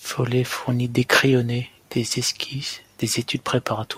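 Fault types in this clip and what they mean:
Nothing to flag here: the speech comes through with no technical faults to be heard anywhere along the way.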